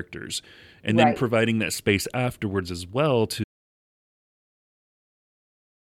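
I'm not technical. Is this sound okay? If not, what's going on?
No. From 3.44 s to the end there is an audio dropout to silence, likely a lost input. Unlike a pause, even the background room sound vanishes.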